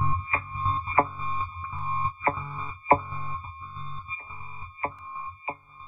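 At 1.79 s and 4.99 s, a block of digital silence about 1.45 ms long, fitting a 64-sample block, cuts the sound abruptly. Each is heard as a tick.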